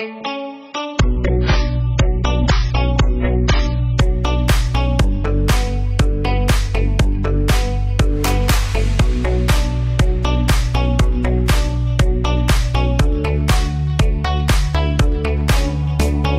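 For the first 4.0 s the sound is dull and smeared, with nothing above 7.6 kHz and stronger codec artefacts, then it brightens suddenly without any gap. This is an adaptive stream starting at a low bitrate, around 12 kbit/s AAC, before stepping up to roughly 96 kbit/s.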